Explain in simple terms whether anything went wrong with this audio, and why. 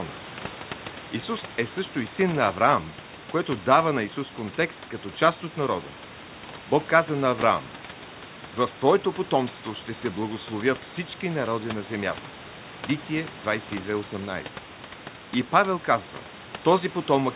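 Nothing went wrong here.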